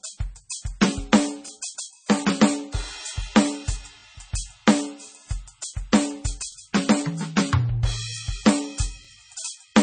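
Throughout the music, nothing sounds above 9 kHz, and the top end has the smeared, swirly texture of heavy MP3 coding. This is likely low-bitrate audio saved at a high bitrate: a source that fits a 24 kbit/s MP3, later re-encoded near 320 kbit/s, which cannot restore the lost detail.

Overlapping chunks produce a brief stutter at 1.48, 4.00, 6.52 and 9.05 s. About 23 ms of audio plays twice at each join, and the 2.5 s spacing points to fixed-length processing blocks that each start slightly before the previous one ended.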